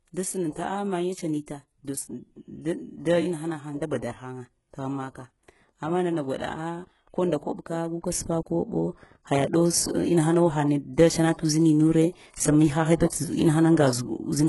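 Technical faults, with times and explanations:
Throughout: HE-AAC compression. The speech is heavily coded, with nothing above 11.5 kHz, and the upper band sounds synthetic. The treble is not the original and is likely rebuilt from copies of the lower spectrum, laid out under a coarse envelope, so its partials don't line up with the ones below the crossover. S sounds come out gritty and lispy. The damage points to a very low bitrate, around 12 kbps.
0.53 s and 13.08 s: pre-echo. Before each of these two sharp onsets there is a brief hiss, about 33 ms long at 0.53 s and 35 ms at 13.08 s. The transform block spreads its coding noise evenly across its whole length, so noise sized for the loud attack also spills into the quiet moment ahead of it. That makes each onset sound softened and smeared instead of crisp.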